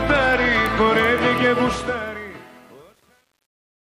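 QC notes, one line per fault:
1.6 to 3.99 s, truncation distortion on a fade: the fade-out that begins around 1.6 s loses resolution as it drops. The gain stage keeps too few bits and adds no dither, which fits about 9-bit resolution. As the level nears the lowest step, the waveform collapses into coarse square steps. From 2.14 s to the end the tail turns gritty.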